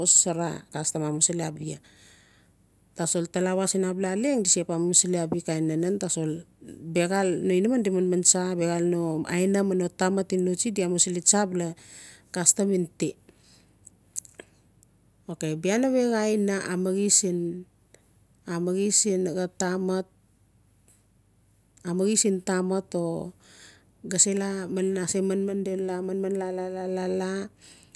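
No technical faults turn up anywhere in this speech recording.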